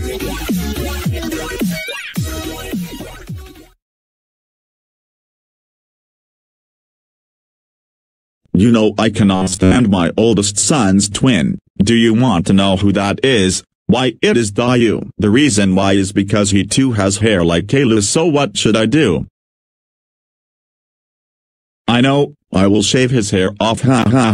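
Around 9.35 s the sound suddenly goes robotic for about 0.4 s, ending near 9.76 s. It's a stiff, metallic buzz pitched at about 94 Hz, and the real material underneath still comes through only loosely. The likely cause is the player running short on incoming audio and repeating the last short buffer, roughly 10.7 ms long, to fill the gap. For most of that stretch it loops old audio instead of playing the real signal.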